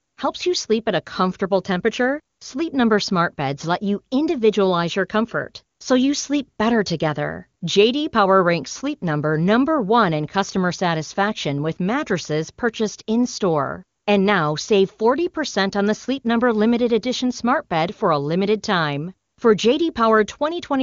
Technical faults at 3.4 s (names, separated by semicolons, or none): none